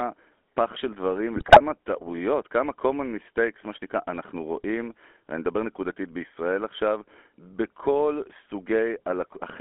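Throughout the clip the speech has passed through the GSM full-rate codec: a vocal-tract model excited by sparse, regularly spaced pulses, consistent with a roughly 13 kbps stream. Only 250 Hz to 3.4 kHz survives, and the voice carries a plainly audible buzzy, gravelly roughness.

From 1.36 to 1.61 s, GSM bit errors hit the decoder. A few percent of bits flipped across a run of consecutive frames and corrupted the filter, pitch and gain values, so the sound breaks into squawks, pops and gargling for about a quarter second.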